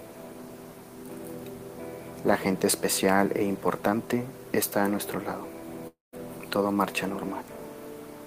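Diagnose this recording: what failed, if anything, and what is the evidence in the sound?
The fault sits in the network stage, and a long network dropout is the likely cause. At 5.87 s the sound stops arriving. The receiver covers the gap by stretching the last sound into a buzz that fades away, about 250 ms of filler in all. Roughly 170 ms of near-silence remains. The audio resumes at 6.14 s, but about 260 ms of the original is simply gone. Nothing was resent, so the missing stretch never plays.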